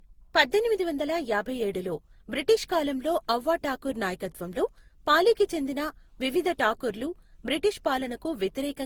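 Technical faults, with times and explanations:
Throughout, generation loss: the speech has a swirly, smeared, hollow quality and blurred consonant attacks, yet the spectrum reaches about 20.2 kHz, so this is not one starved encode with its top end cut. That full band beside such smearing points to repeated lossy passes, likely around seven re-encodings through Opus near 48 kbit/s, each quantising on a fresh frame grid so that noise and spectral holes pile up.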